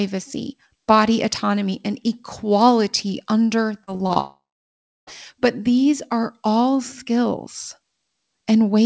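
From 3.84 to 4.18 s, right after "autonomy and equality under", the speech turns choppy, with four short holes, the longest 34 ms. This is repeated packet loss: about 100 ms went missing and was patched by extending the preceding sound.

From 4.20 to 5.09 s the audio becomes a fading buzz or hiss and then drops to near-silence for roughly two-thirds of a second before speech resumes with a piece gone. This is likely a long network dropout, with the last sound stretched over the gap.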